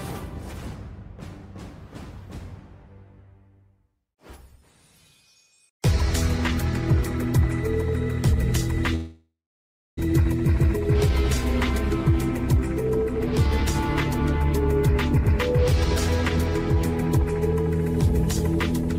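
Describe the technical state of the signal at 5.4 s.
Nothing goes wrong at 5.4 s; the signal is intact at that moment.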